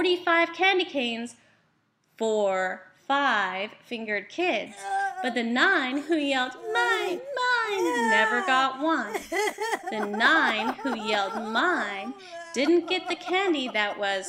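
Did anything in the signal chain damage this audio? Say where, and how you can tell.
No, nothing along the chain has left an audible mark on this audio. At no stage, from capture to playback, can any damage be heard.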